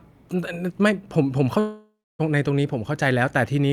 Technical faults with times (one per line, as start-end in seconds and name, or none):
1.59-2.21 long network dropout